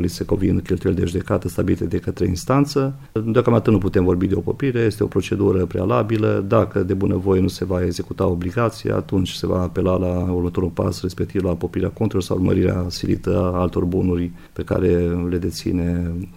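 No technical faults can be heard anywhere in the clip.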